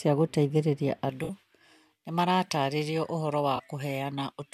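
From 1.1 s onward, pre-emphasis was left on. The treble boost was never undone, so 10 kHz stands about 11 dB proud, sounding thin and sibilant, with a brighter upper spectrogram. Corrupt frames were concealed at 1.24–1.30 s, 2.45–2.50 s and 3.56–3.60 s. The decoder covered the damaged audio.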